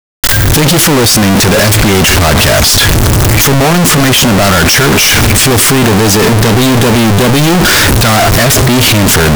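From start to end the speech is blasted out near-square at an almost fixed, high level, background noise as loud as the talking, pitch still traceable. It is likely a float read as integer: 32-bit float samples taken as 32-bit integers. The waveform shows flat-topped blocks; the spectrogram, dense broadband energy.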